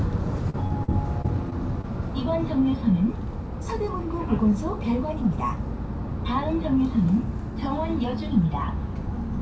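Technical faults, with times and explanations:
0.50–1.85 s, repeated packet loss (robotic sound): six gaps, longest 41 ms, patched by extending prior sound, so it's choppy with pieces missing; the spectrogram shows smeared, repeated slices.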